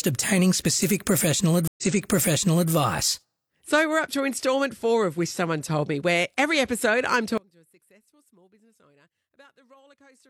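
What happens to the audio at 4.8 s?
Nothing goes wrong at 4.8 s; the speech carries on intact through that moment.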